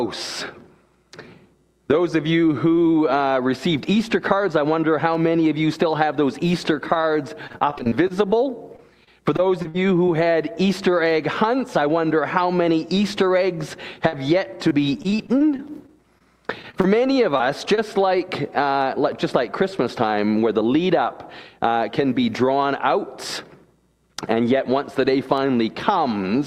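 Repeated packet loss hits twice, from 6.75 to 10.09 s and again from 14.08 to 17.79 s. Packets keep arriving late or not at all, and each hole is bridged by extending the last sound, with another dropout following close behind. The first stretch has gaps up to 57 ms, the second up to 42 ms. The audio turns choppy and robotic, with stuttering fill and small pieces missing.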